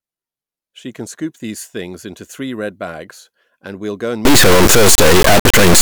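From 4.25 s to the end, the speech turns into a harsh, extremely loud buzzing square wave: integer read as float, 32-bit integer samples decoded as 32-bit float.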